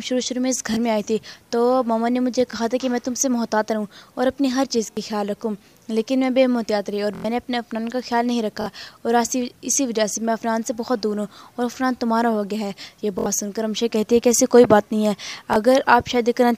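Repeated buffer stutters at 0.74, 2.51, 4.92, 7.15, 8.62, 13.19 and 15.53 s. Late audio made the device replay an identical 23 ms block (fitting a 1024-sample buffer) up to four times, longest at 7.15 s. This shows as copied waveform segments with hard vertical seams.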